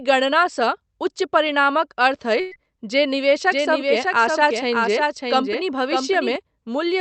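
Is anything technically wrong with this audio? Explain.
Yes. Three separate faults are audible in this speech.

Short concealed packet loss occurs at 1.47 to 1.50 s. About 20 ms of audio never arrived in time to be decoded. The receiver covered roughly 10 ms of the gap by extending the preceding sound, then crossfaded back into the real signal. The result is a brief smear or wobble. A short consonant at that point may be lost. The call path's 8 kHz cut-off, consistent with Opus coding, is heard throughout.

A burst of packet loss runs from 2.40 to 2.53 s. About 120 ms went missing in a row. There is no silent hole. Instead, the decoder stretched the last sound for about 110 ms and let it fade. A voiced sound turns into a held buzz, and an unvoiced one into a dying hiss. The speech then resumes further along, and the section in between is simply gone.

A doubled audio track is present from 3.52 to 6.36 s. 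A second full-band copy of the speech trails the original by roughly 0.7 s, at about 5 dB lower. It has no decay or room colouring, so it is not an echo. It starts and stops abruptly at those times. The likely cause is the same audio being captured a second time through a slower path, or two unaligned copies left in an edit.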